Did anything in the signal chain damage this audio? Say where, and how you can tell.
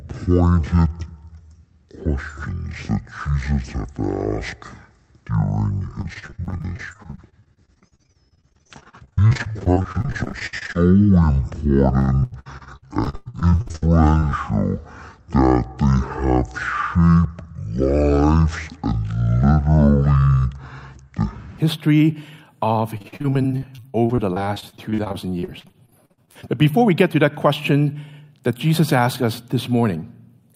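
Yes. From the start to 21.58 s the audio runs at about half speed (0.503x), and pitch drops with it by roughly ten semitones. Everything sounds deep and slow, with timing and pitch stretched together rather than separately. That coupling points to a resampling or clock mismatch rather than a deliberate pitch effect. The likely cause is a playback or storage stage that read the samples against the wrong clock rate.

Repeated packet loss (robotic sound) occurs on the network path in three stretches: 6.01 to 10.77 s, 11.99 to 13.83 s, and 22.97 to 26.45 s. Gaps come in quick succession, each patched by extending the previous sound, so the audio turns choppy. About 31%, 43% and 29% of those spans respectively is synthetic fill. The worst gaps reach 60 ms, 101 ms and 58 ms.

Short concealed packet loss appears twice in close succession: 14.19 to 14.24 s and 14.30 to 14.33 s. Each is a gap of around 20 ms that the receiver bridged by continuing the preceding sound and cross-fading back into the real signal. 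Audibly these are brief smears or wobbles rather than clear dropouts. They also originate at the network and jitter-buffer stage, as isolated losses just after the second robotic stretch ends.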